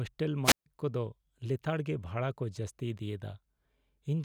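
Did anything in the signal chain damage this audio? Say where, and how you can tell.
Yes. A wireless microphone squelch dropout occurs from 0.44 to 0.66 s, at the radio link between the analogue FM transmitter and its receiver. Hiss rises briefly, then the speech falls into a hole of near silence lasting about 142 ms before returning on "ᱠᱚ ᱫᱚ". The RF signal faded far enough that the receiver's squelch gate closed and muted its output rather than pass raw static, then reopened once the carrier recovered.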